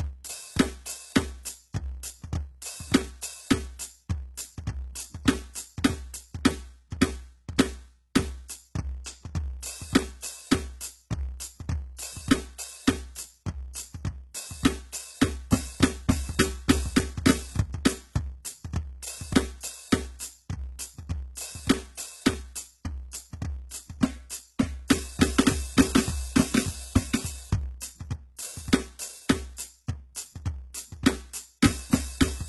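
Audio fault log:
Throughout, doubled audio track: a second full-band copy of the music trails the original by roughly 0.7 s at about the same level, with no decay or room colour. This is likely a second capture through a slower path or two out-of-step copies in an edit.
Throughout, block size mismatch (truncated): a steady buzz at 91.9 Hz and playback running 1.07 times fast. The buzz rate fits 512-sample blocks being written while the next stage reads shorter ones, discarding each block's tail.
Throughout, HE-AAC compression: heavy codec damage, with nothing above 11.8 kHz and treble that sounds rebuilt rather than original. Gritty, metallic highs are likely from spectral band replication copying lower bands upward, at a bitrate pointing to about 16 kbps.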